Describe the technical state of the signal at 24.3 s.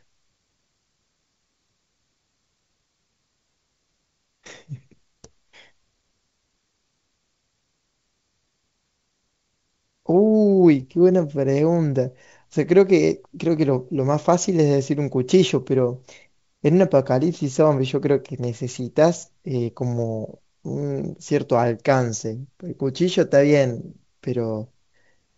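At 24.3 s the signal is intact, with the speech carried cleanly through G.722 wideband telephone coding at 64 kbit/s and no fault present.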